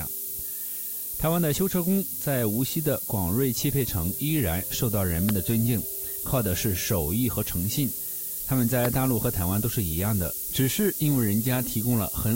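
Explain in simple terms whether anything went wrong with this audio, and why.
A steady, thin hiss runs the whole way through, leaning hard toward the treble and sitting nearly as loud as the sound itself. That's low bit depth with noise shaping. Only a handful of levels are used, which fits about 5 bits, and the rounding error is shoved up into the highs.

There are also two loud pops, one at 5.29 to 5.31 s and another at 8.85 to 8.87 s. Each is a single sharp click jumping well above the sound, which keeps going underneath. A brief electrical spike, likely from a plug, switch or driver glitch, got added in.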